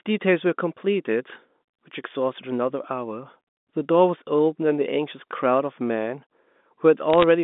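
From 7.10 to 7.24 s, bit errors on a digital phone line put a burst of sharp ticks and crackle over the speech, fitting a fraction of a percent of flipped bits on the G.711 mu-law line. Each flip corrupts one sample, so the waveform shows isolated single-sample spikes and the spectrogram thin vertical lines spanning the band.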